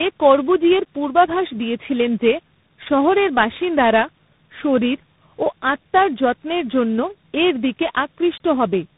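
Right from the start and all the way through, this speech has the sound of tandem speech coding: it seems to have passed through about three speech codecs in a row, something like AMR-NB, then G.726, ending on CVSD. Each one re-coded the last one's damage, so it's rough, muffled and warbly, with nothing above 3.8 kHz.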